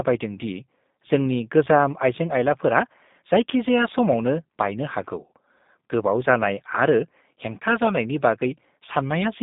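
From start to finish the speech has gone through a G.729 codec, and the damage is plainly audible. The band is squeezed to roughly 150 Hz up to 3.7 kHz, with nothing at all above 3.8 kHz, so it's thin and boxy. The rough, slightly synthetic edge comes from the codec rebuilding each short frame from a vocal tract model, a pitch guess and a few pulses. That fits an 8 kbit/s G.729A link.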